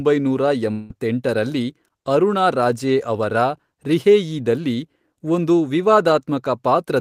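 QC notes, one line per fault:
0.71–0.92 s, long network dropout: the stream likely stalled for about 0.2 s, so a stretch of speech never reached the receiver. To cover the hole, the receiver stretched the last sound it had into a fading buzz or hiss lasting about 184 ms, with no true silence left behind. About 180 ms of real speech is lost for good, so the audio resumes at 0.92 s with that portion skipped.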